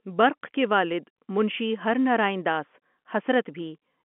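No faults detected: the speech arrives over a G.711 mu-law telephone path at 64 kbps, confined to the 200 Hz to 3.4 kHz line band, and that narrowband character belongs to the format itself.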